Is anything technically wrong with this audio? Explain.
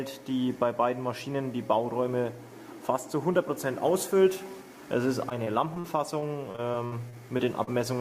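Yes. From 5.29 to 7.74 s, repeated packet loss (robotic sound): about a dozen short dropouts, up to 59 ms, are patched by repeating prior audio, giving choppy sound with smeared, repeated spectrogram blocks.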